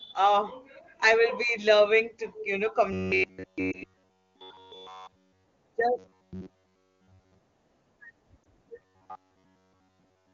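A speech clip marred by two distinct faults. The main one is robotic sound from repeated short buffers, heard from 2.93 to 5.47 s (right after "loving to you know"), 5.99 to 7.38 s, and 8.82 to 10.34 s. Through these stretches the sound becomes a rigid metallic buzz locked at 93.8 Hz, which fits a segment of roughly 10.7 ms being looped. In the first two stretches essentially all the audio is replaced by repeats, and in the last one most of it is. The likely cause is that audio arrived too rarely and the playback side kept replaying its last short buffer while the real material was skipped. The tell is that fixed, unchanging pitch running for a second or more.

Separately, there are lost AMR speech frames: one 20 ms frame dropped at about 3.72 s, inside the first buzzy stretch, and another at 8.43 s. Here the wideband AMR decoder held the last good pitch and vocal tract settings at falling gain, giving only a brief dip or warble before the sound recovers. 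That brevity, with no steady imposed pitch, separates it from the buffer looping. The AMR-WB coding itself adds no more than faint damage.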